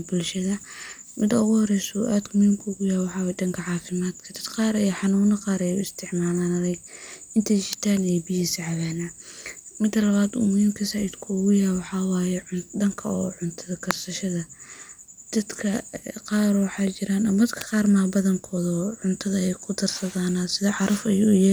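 A speech recording with three sharp snaps at 7.73, 13.91 and 17.61 s. Each lasts only a few milliseconds and hits close to full scale, the middle one hardest. They sit on top of the speech. These are likely electrical switching spikes, arcs from nearby equipment coupling into the line.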